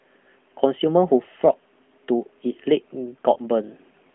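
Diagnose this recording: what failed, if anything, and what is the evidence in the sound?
A brief dip and warble in the speech from 3.34 to 3.40 s is a lost AMR speech frame over the radio network; the narrowband decoder concealed what sounds like a single 20 ms frame by repeating the previous frame's settings at reduced gain.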